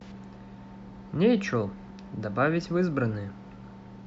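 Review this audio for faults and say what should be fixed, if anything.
Nothing needs fixing: the speech signal has intact continuity and no audible defects anywhere in the recording.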